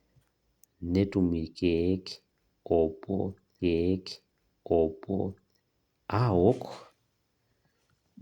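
At 3.59 s the stream segment repeats: the player queued the same chunk twice, so about 2 s of speech plays again until 5.59 s, with a small blip at the jump back.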